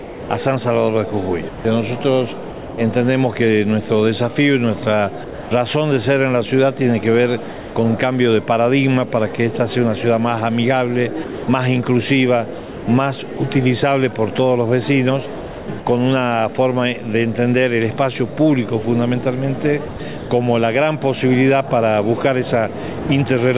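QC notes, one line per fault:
0.00–2.78 s, 11.24–13.40 s, 15.38–15.86 s, 19.88–20.30 s: sound chopped by the voice detector. The sound keeps breaking up into flat, synthetic hiss, about 0.74 s, 0.54 s, 0.36 s and 0.24 s in total per stretch. The likely cause is a sender's detector switching transmission on and off repeatedly, with comfort noise filling the gaps.
5.24–5.51 s, 7.52–7.76 s, 23.00–23.09 s: sound dropped by the voice detector. The sound vanishes into steady noise for 270 ms, 240 ms and 90 ms, then returns. Likely the detector mistook quiet sound for background, stopped sending, and the receiver played comfort noise instead.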